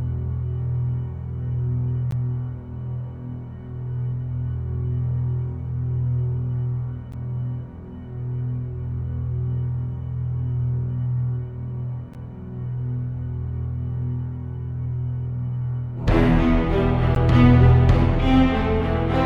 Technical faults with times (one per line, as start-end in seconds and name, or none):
2.11 gap between chunks
7.12 gap between chunks
12.14 gap between chunks
17.15 gap between chunks